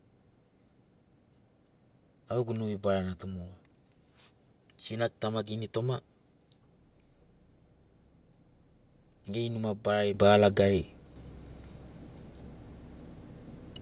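The call software's automatic gain control twice decided the microphone was too quiet and stepped up the device's input volume. At 10.14 s the level jumps by about 9 dB, and at 11.16 s it rises again by about 5 dB. Voice and room noise lift together instantly, with no fade, heard through a narrowband call path that carries nothing above 4 kHz, which fits G.711 mu-law.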